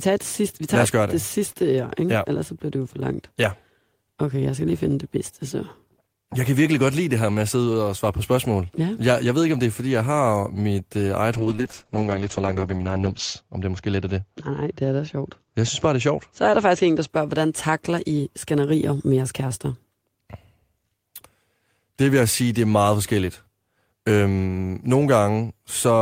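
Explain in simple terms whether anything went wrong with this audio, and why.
Something did go wrong: a call bitrate drop runs from about 11.35 to 17.15 s, starting right after "har mit øh eget" and clearing up just before "hvordan takler I skænderier". The connection got squeezed, so the encoder had to describe the speech with far fewer bits. The voice turns rough and a bit watery, and the highs above about 8 kHz get cut off, leaving it muffled. It's at its worst for roughly two seconds, then recovers.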